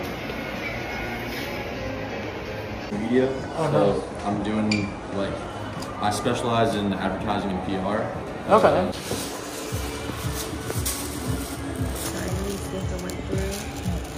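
From 3.84 s to 5.60 s the audio shows a Bluetooth SBC bit pool drop. The link appears to have congested, and the encoder cut its bit allocation sharply, which fits a bit pool falling from around 31 to about 15, roughly 105 kbps. With so few bits the upper sub-bands are starved and the remaining bands are coarsely quantised, so the treble turns dull and a gritty noise sits over the sound until the rate recovers at 5.60 s.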